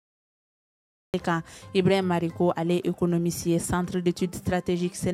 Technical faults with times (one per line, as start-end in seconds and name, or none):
0.00-1.14 cut-off start